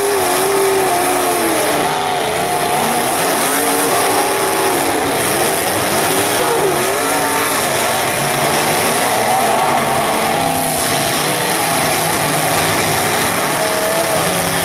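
At 6.39 s the playback performs a skip ahead: about a second and a half of audio never arrives at the output, discarded in transit or flushed by a jitter buffer that had overfilled while later material was already queued. Nothing fills the gap, so the sound lurches forward mid-flow with an abrupt, spliced feel. On a waveform or spectrogram the join appears as a sudden discontinuity, with envelope and harmonic patterns changing instantly and no silent gap between them.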